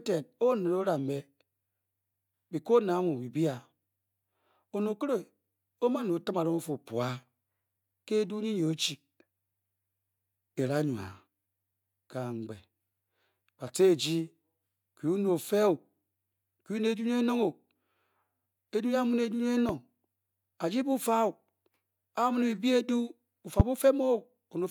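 Loud pops hit this speech recording at 19.69 to 19.72 s and again at 23.60 to 23.63 s, each a single sharp burst lasting about 30 ms and standing roughly 10 dB and then some 20 dB above the surrounding level, with the talking continuing beneath them. The likely cause is a sudden electrical step or spike, such as a plug, switch, static discharge or driver glitch, being summed into the signal path and shaped into a brief thump.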